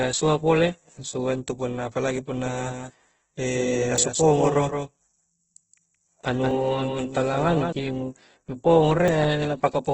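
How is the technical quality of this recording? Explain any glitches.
The recording has clear technical faults: heavy codec damage throughout, a doubled track over the middle section, and three small skips.

Throughout, the speech sounds grainy and rough, with nothing above about 8 kHz. This is likely Opus compression at a low bitrate, around 12 kbps. With too few bits, the encoder fills bands with folded or noisy content, which turns clean tones gritty.

From 2.38 s to 7.73 s, a second full-band copy of the speech trails the first by roughly 150 ms and sits a few dB quieter. It has no reverberant tail, and it starts and stops abruptly. This is likely a doubled audio track, where the same audio was captured again through a slower path and mixed back in.

At 3.98 s, 6.51 s and 9.08 s there are skips where the sound jumps forward with no gap. The first skip loses about twenty milliseconds and the others roughly half that. 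A dropped buffer (overrun) is the probable cause, with samples overwritten before being read and the two edges spliced together.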